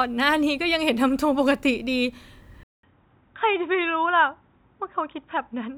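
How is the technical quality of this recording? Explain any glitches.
The recording degrades partway through. From 2.63 s to the end, the speech drops out for about 200 ms and then returns dull and boxy, with nothing above 3.8 kHz, roughly 5 dB quieter, and over a faint new noise floor. This is likely an input switched to a poorer device, such as a second microphone or a headset's call profile. The gap is the handover, and the narrower band, lower level and different background come from the new device's own capture path.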